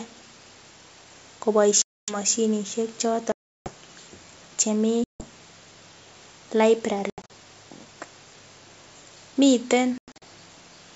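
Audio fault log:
1.82–2.17 s, 3.32–3.72 s, 5.04–5.26 s, 7.10–7.31 s and 9.98–10.23 s, packet loss on an ADPCM call: speech drops to hard-edged silence, about 260, 340 and 160 ms in the first three holes. The last two are broken gaps of 140 ms lost over 200 ms and 180 ms over 240 ms. After each hole the decoder's predictor and step size no longer match the sender's, so the speech comes back with brief, slight distortion that settles within tens of milliseconds. That recovery separates it from simple muting. Wideband clarity around the holes remains.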